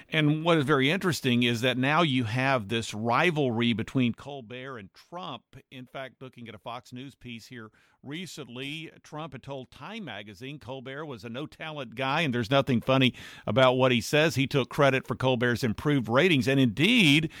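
Zipper noise: the speech level is moved in unsmoothed steps. From 3.98 to 4.36 s it drops by about 15 dB at roughly 70 steps a second, and from 11.61 to 12.52 s it rises by about 15 dB at around 30. Each step clicks, so a ticking zip rides on the speech.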